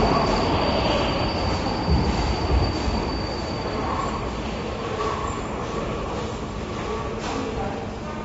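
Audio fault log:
Throughout, AAC compression: the everyday sounds are dull and smeared, with plainly audible codec damage, a warbling, fizzy texture on sustained parts, and nothing above 7.6 kHz. The likely cause is AAC-LC coding at a low bitrate, consistent with roughly 24 kbps. At that rate the encoder drops the top band and quantises the rest coarsely. A spectrogram shows a flat ceiling at 7.6 kHz.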